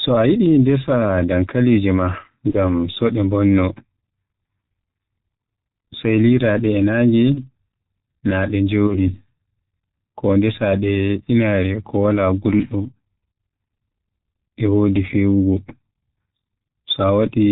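Throughout, the speech carries the G.723.1 codec's heavy damage: nothing above 4 kHz, a hoarse texture and smeared consonants from its slow voice model. This points to the 6.3 kbit/s mode rather than a plain band-limiting filter.

At 2.51–2.58 s, just before "so de mbonno", at 7.35–7.45 s, and at 8.87–8.99 s, just after "naa de", VoIP packet loss is concealed by the speech codec. Each event fits a single lost 30 ms frame. The decoder stretches the last sound into a fading buzz or coloured noise instead of leaving a silent gap, and the distortion lingers after the packets return.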